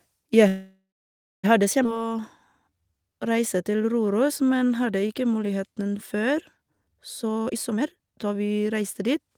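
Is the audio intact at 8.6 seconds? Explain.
No. At 8.6 seconds you're inside a jitter buffer speed-up that runs from 7.23 to about 9.36 s. The receiver had too much speech queued up, so it kept snipping out tiny pitch-period-sized slices, over and over, to catch back up, trimming about a second in total. The result is speech playing at roughly 141% speed with the pitch unchanged, so it comes across as noticeably rushed and crammed together.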